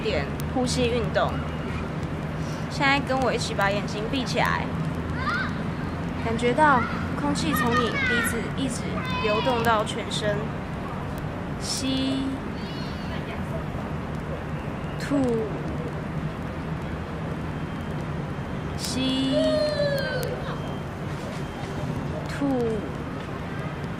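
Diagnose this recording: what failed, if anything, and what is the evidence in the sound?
Word clock ticks run from 0.10 s to 23.99 s as sharp clicks of uneven strength, about twenty per second. A digital receiver is free-running rather than locked to the sender's clock, off by roughly 400 ppm, so a single sample is dropped or repeated at each slip.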